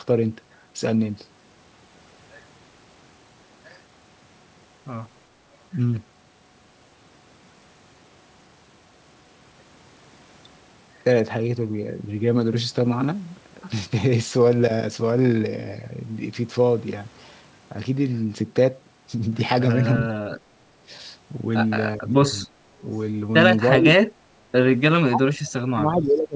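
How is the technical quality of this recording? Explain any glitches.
The recording has one fault, speech suppressed in double talk, near the end. The sound stops at 8 kHz, which fits a G.722 call codec.

The speech drops at 20.58–20.83 s (about 20 dB), 21.96–22.55 s (about 15 dB), 22.81–22.85 s (about 10 dB), 23.77–23.85 s (about 15 dB), and from 24.95 s to the end (about 35 dB). The likely cause is an echo canceller that could not tell the talker from the far side's loudspeaker echo, so it turned both down. The talker's speech dips sharply and cuts out in pieces, nearly disappearing over the last second and a half.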